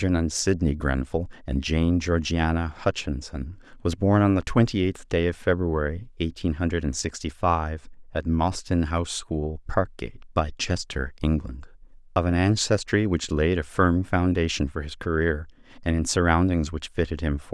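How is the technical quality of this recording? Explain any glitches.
Nothing in the recording stood out as a technical problem on listening, so there are no glitches to explain.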